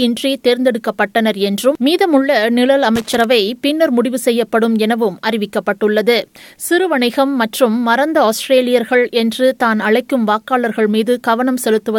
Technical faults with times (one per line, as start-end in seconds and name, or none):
2.95-3.24 loose connector crackle